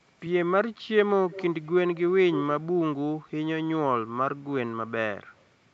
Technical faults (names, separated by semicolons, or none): echo leak